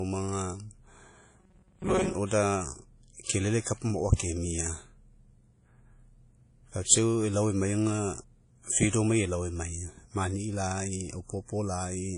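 Throughout the speech the sound is ringing and washy, with a hiss that swells and recedes with the talker and nothing above about 10.1 kHz. This is plainly audible damage that points to WMA compression, which fits an older WMA encoder at a low bitrate around 32 kbps. Quantisation noise smeared across long transform blocks, plus zeroed weak components and the cut top band, gives a steady codec character. That sets it apart from the brief, localised events below.

From 1.40 to 2.15 s the speech turns into a rigid metallic buzz at 188 Hz that only loosely follows the original. This is robotic sound from repeated short buffers, likely caused by audio arriving too seldom so that the last stretch of roughly 5.3 ms is replayed to fill the gap. About half the material in that span is repetition rather than new audio. Unlike codec ringing, the buzz holds a fixed rate.

Pre-echo occurs from 3.23 to 3.27 s, spreading about 37 ms, and again from 8.90 to 8.93 s, spreading about 32 ms. 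In each case a short hiss runs ahead of a sharp attack, and the onset sounds softened. The transform block's noise, sized for the loud attack near its end, has leaked into the quiet just before it. Unlike the constant washiness, this noise sits just before transients.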